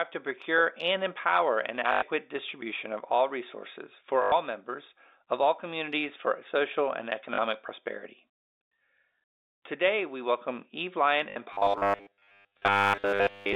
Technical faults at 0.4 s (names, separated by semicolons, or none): none